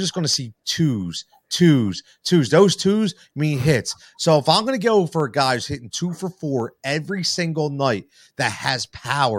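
Speech with dropped samples at 0.34, 5.20 and 6.60 s, each a single sharp click, likely from a handful of missing samples making the waveform jump, seen as a thin vertical spectrogram line.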